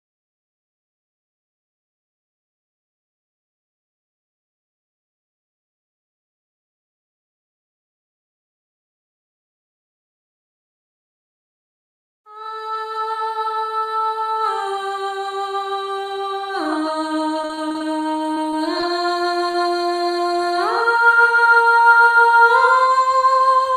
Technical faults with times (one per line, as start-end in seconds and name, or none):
17.41-17.82 repeated packet loss (robotic sound)
18.34-18.54 short concealed packet loss
18.80-18.84 short concealed packet loss
19.51-19.56 short concealed packet loss